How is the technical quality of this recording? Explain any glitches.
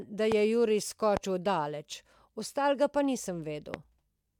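The recording is marred by three loud pops, at 0.32–0.34 s, 1.17–1.19 s and 3.74–3.76 s, each a single sharp click lasting about 24 ms and peaking roughly 15 dB above the speech, which continues underneath. The likely cause is a brief voltage spike, from a switch, static or a driver glitch, added to the signal. On a waveform each shows as a tall narrow spike; on a spectrogram, a thin vertical stripe spanning all frequencies.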